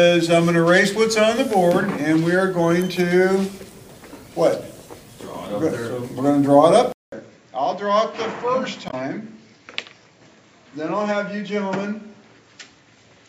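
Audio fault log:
6.92–13.29 s input switched to a poorer device: after a 200 ms gap the sound turns dull and boxy, with nothing above 7.6 kHz, a level about 10 dB lower and a new faint noise floor roughly 40 dB down. This likely means recording moved to a narrower-band microphone or headset profile.
8.87–8.94 s damaged data in a compressed stream: a brief 70 ms glitch breaks into the sound. Corrupted bytes in the stream left the decoder misreading frames and losing sync until it found the next valid frame header.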